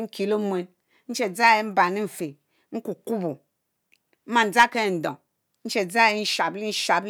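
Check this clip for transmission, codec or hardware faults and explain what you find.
One fault shows up in this speech clip. At 2.20 s a tiny piece of audio, only a few milliseconds, is missing, with the two sides butted together. This is likely audio missing between chunks, lost while 2.5-second processing blocks hand over. It sounds like a brief skip; the waveform shows an abrupt discontinuity, and the spectrogram a thin vertical line.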